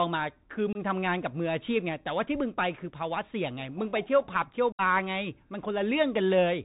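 Bluetooth CVSD headset codec, present from start to finish: the speech passes through the narrowband headset coder, and the sound fits a 64 kbit/s CVSD link. Each sample is reduced to a single up-or-down bit with an adapting step, so nothing above 4 kHz survives and the voice sounds boxed-in. Loud, bright passages outrun the step size and turn harsh, s sounds come out scratchy, and a fine granular hiss sits beneath everything.

Unconcealed Bluetooth headset packet loss, at 0.73 to 0.77 s and again at 4.72 to 4.81 s: voice packets between headset and phone went missing, and nothing was done to hide the gap, so silence or an idle pattern fills it. The first hole lasts 22.5 ms, which fits a handful of lost packets. The second lasts 67.5 ms, which fits around ten. Both cut in and out abruptly, and the speech resumes quieter for a moment as the CVSD step size rebuilds.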